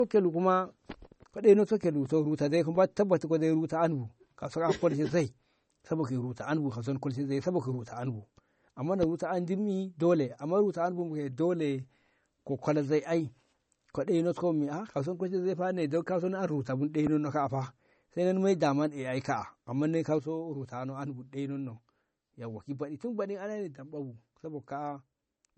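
From the first second the speech has nothing above 8.4 kHz, and the band below carries the smeary, watery swirl of heavy MP3 coding. This is likely low-bitrate audio saved at a high bitrate: the pattern fits a 32 kbit/s MP3 later re-encoded at 256 kbit/s. A file made at that high rate from a clean source would keep its treble and sound clear. Here the second pass preserved the damage from the first and added almost nothing.

At 20.19 s the level falls abruptly by about 6 dB and stays down to the end of the clip. This drop is likely one channel dropping out of a stereo signal, so the mono sum falls to half its amplitude in one step. A gain change or fade would ramp or vary. This is a clean, fixed step with the tone unchanged, which is what happens when a channel vanishes and the remaining content was common to both sides.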